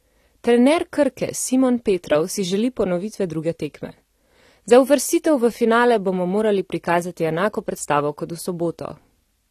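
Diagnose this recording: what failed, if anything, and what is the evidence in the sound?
The codec stage is the likely point of failure: the speech has been through AAC compression at a low bitrate, with damage plainly audible across the whole recording. Nothing remains above 13.5 kHz, so the top end sounds dull and clipped off, and the remaining band has a smeared, warbling texture on sustained sounds and fizzy sibilants. That fits a rate of roughly 32 kbps with AAC-LC, where too few bits per frame force the encoder to drop high frequencies and coarsely quantise the rest.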